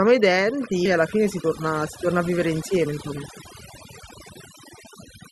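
Overdone noise removal runs through the whole speech clip. The noise reducer was set too hard. It pushes narrow frequency bands down or off whenever they sit near its noise estimate, and quiet parts of the voice go with them. The background drops, broken by twinkling specks. Its top end stops at about 12 kHz, which fits an Opus call path at around 32 kbps.

At 0.85 to 0.87 s there is a skip ahead. Playback jumps forward with no gap filled in. Roughly 0.7 s of speech is simply gone, and the audio on either side is butted together almost directly. This happens when a stretch of audio is dropped while later audio is already waiting, for example when an overfull jitter buffer discards it. The result is an abrupt lurch in the flow of speech.

From 0.97 s to 4.71 s comes a jitter buffer speed-up. The buffer was holding more audio than its target. To cut that delay, the receiver trimmed out short pieces, each one or a few pitch periods long, many times over. 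About 0.3 s is removed in total. The speech runs at about 109 percent speed with unchanged pitch. It sounds hurried and pressed.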